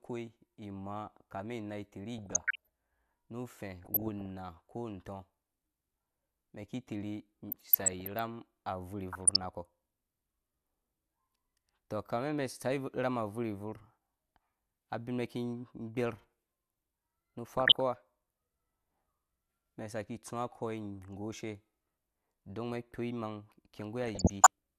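DAB burbling appears at 2.18–2.67 s (just after "ni inai"), 3.85–4.26 s, 7.50–8.19 s, 9.12–9.44 s, 17.57–17.80 s and 24.01–24.47 s. Bit errors escaping error correction corrupt MP2 scale factors and samples, so individual sub-bands get short noise blips or jump in level for up to a frame. The result ranges from bubbling, squelchy chirps to a few watery blips over the speech. The first burst is roughest, consistent with an error rate near 1 percent.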